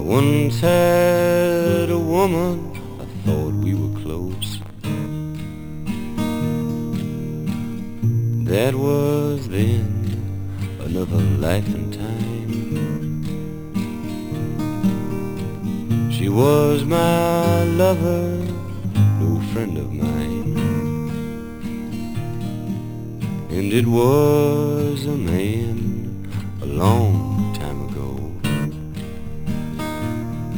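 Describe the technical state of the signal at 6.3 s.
At 6.3 s, as throughout the clip, there is imaging from sample-and-hold upsampling. The 12 kHz signal was raised to 48 kHz by repeating samples without smoothing. This leaves mirrored copies from 6 kHz to 12 kHz, about 23 dB down, heard as a metallic fizz. Unlike steady hiss, the fizz rises and falls with the sound, and its lowest copy moves opposite to the pitch.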